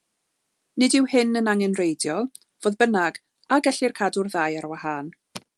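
No faults are audible anywhere in the speech.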